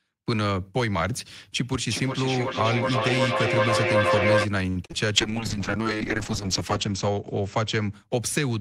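From 1.81 to 4.49 s a feedback howl builds: audio circulates between microphone and loudspeaker, gaining level on each pass, until a tone near 500 Hz dominates, pulsing roughly every 0.4 s and peaking about 3 dB above the speech.

At 4.69 to 4.78 s comes a short stall from a late packet. The jitter buffer ran dry, so the receiver held the last sound for 65 ms until the packet arrived, then carried on without losing any of the speech.

Two short concealed packet losses follow at 4.86 to 4.91 s and 4.91 to 4.94 s. About 40 ms and 20 ms of audio never arrived, and the decoder extended the preceding sound across each gap, giving a brief smear.

From 5.18 to 8.42 s a call bitrate drop makes the speech rough and muffled. The encoder cut its rate, which fits a fall from about 32 to 8 kbps, and the audio bandwidth narrowed from 20 kHz to 8 kHz, staying at its lowest for 1.41 s.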